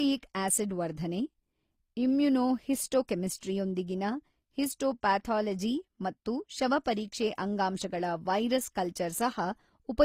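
From start to end, the speech was likely run through transcoding between lossy codecs: a low-rate HE-AAC encode, then Opus. This fits roughly 24 and 48 kbit/s. Nothing remains above 15.9 kHz, and Opus's own artefacts are layered over the earlier HE-AAC ones, heard together.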